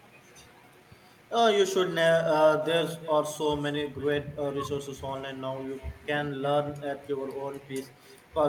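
It's a speech clip carrying a few network-call problems. Running through the whole thing is an echo with no canceller. Each phrase gets shadowed by a quieter copy about 19 dB down, arriving around a third of a second later. That delay is the round trip to the far end, where a loudspeaker is feeding back into the microphone and nothing is subtracting it, so the copy sounds thinner than the original. Early on, between 0.63 and 0.65 s, there's a skip ahead. Playback jumps forward over something like 0.4 s of speech, with no fill and essentially no gap, so the material on either side is butted straight together. That points to a chunk being dropped in transit or thrown out by an overflowing jitter buffer while later audio was already queued, which also pulls the delay down by about the same amount. Right after that, from 1.21 to 1.63 s, there's a jitter buffer speed-up. The speech runs at about 108% of normal speed with the pitch unchanged, so that stretch comes across a bit rushed. 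The buffer was holding more audio than it wanted and trimmed short pitch-period-sized slices over and over, removing roughly 40 ms in total to catch up.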